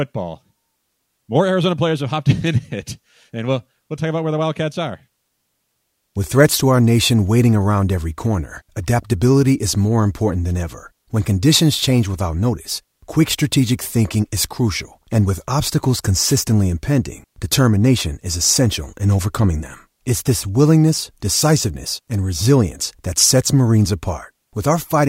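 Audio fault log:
16.21–16.36 s, wireless microphone noise hit: a brief swish of static, roughly 0.15 s long, breaks over the speech and then clears as quickly as it came. This is the sound of an analogue FM radio mic losing signal for an instant, when reflected paths arrive out of phase and cancel at the receiver. With the carrier weakened, the receiver's own hiss surges up before reception recovers.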